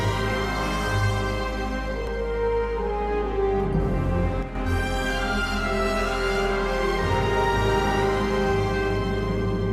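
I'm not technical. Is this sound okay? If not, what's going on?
No, there's a brief glitch. From about 4.43 to 4.55 s, roughly an eighth of a second, the sound suddenly drops to about half its level and then jumps straight back. That's the typical sign of one channel dropping out: the recording has a left and a right side, and for that moment one side likely cut out, so only the other side was left playing. It's quick, but you'll hear it as a sudden dip.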